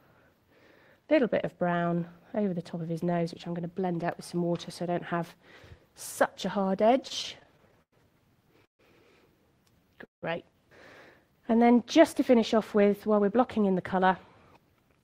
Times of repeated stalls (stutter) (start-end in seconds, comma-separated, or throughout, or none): 7.07-7.94